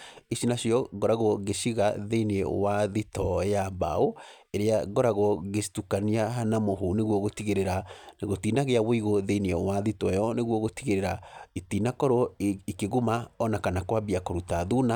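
No dropouts, distortion, glitches or level jumps are audible anywhere in the recording.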